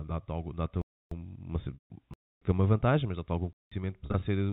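Blocks of digital silence cut the speech at 0.82–1.12 s, 2.14–2.42 s and 3.53–3.72 s. Output buffers went unfilled, which fits an 8192-sample block for the last one. Each drops abruptly to silence. Packet loss with pitch repetition occurs at 1.74–1.90 s (160 ms lost) and 4.06–4.22 s (80 ms scattered in runs up to 40 ms). Here a buzzy held pitch fades out instead of cutting hard, all within the G.711 telephone band, which stops at 4 kHz.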